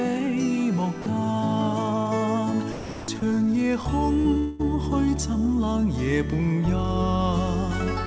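At 1.02 to 1.06 s the sound gives way to steady, flat noise for 40 ms. This is sound dropped by the voice detector, likely because the sender judged that quiet stretch to be background and stopped sending. The receiver played comfort noise instead. The same happens from 2.72 to 3.08 s, a longer 360 ms gap, and again from 3.20 to 3.22 s. Each time the real sound returns when the detector triggers again.

At 4.22 to 4.26 s there is short concealed packet loss. About 20 ms of audio arrived too late for the decoder. The receiver stretched the last sound over the hole and then blended back into the real signal. It comes across as a brief smear or wobble.

From 4.38 to 4.64 s comes a long network dropout. About 200 ms of audio never arrived, likely through a network stall. The receiver kept extending the previous sound as a fading buzz or hiss for about 210 ms, with no full silence. The audio then resumes slightly further on, and a small piece of it is skipped.

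At 8.06 s, right at the end, the voice detector likely cuts in once more. The final moment of sound is swapped for comfort noise.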